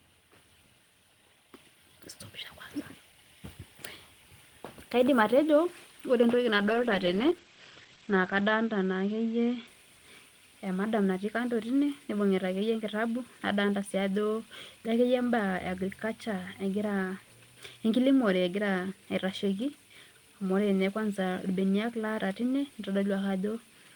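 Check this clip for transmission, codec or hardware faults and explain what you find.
One fault: a call bitrate drop. From 6.59 to 9.73 s, the speech turns rough and muffled, with highs above 8 kHz gone. That fits the encoder falling from 32 to 15 kbps, coding coarsely and trimming bandwidth.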